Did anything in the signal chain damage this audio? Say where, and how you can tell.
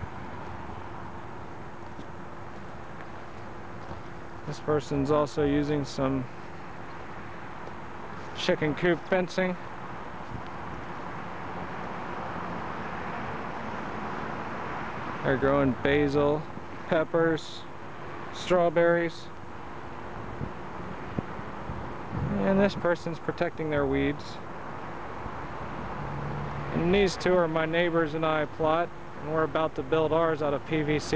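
Yes. Overlap-add ripple runs throughout, from a frame-based processing stage whose windowed frames were rejoined with overlaps that don't sum to constant gain. The level pulses by about 6 dB around 300 times a second, a metallic buzz with extra tones around each note that comes from modulating the sound itself.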